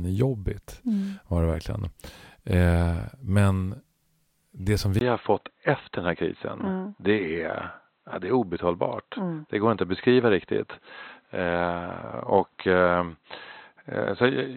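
The input was likely switched to a poorer device at 4.99 s, just after "det som", following a 20 ms gap. From there to the end, nothing passes above 4.1 kHz, so the speech turns dull and boxy at an unchanged level, with faint new background noise.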